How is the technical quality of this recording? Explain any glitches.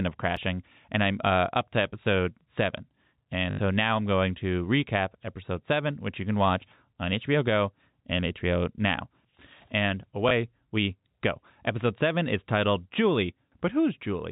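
The recording has four brief glitches of two kinds: repeated buffers and packet loss with the last packet repeated. The speech is band-limited to below 4 kHz, consistent with G.711 mu-law telephone coding.

Repeated buffer at 0.37 s and 7.23 s: audio did not reach the output in time, so the device replayed its last 2.67 ms block, twice at 0.37 s and once at 7.23 s. That block length fits a 128-sample buffer. Each repeat is too short to hear as a stutter and comes across as a click or brief buzz.

Packet loss with last packet repeated from 3.51 to 3.59 s and from 10.29 to 10.31 s: the receiver filled the gaps by replaying the last packet it had, for 80 ms and then 20 ms. The loops seldom line up with the pitch of the voice. The longer run buzzes at about 50 Hz with a robotic stutter, which points to 20 ms packets.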